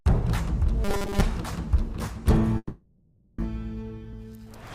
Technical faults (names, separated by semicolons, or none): robotic sound from repeated short buffers; long network dropout; jitter buffer speed-up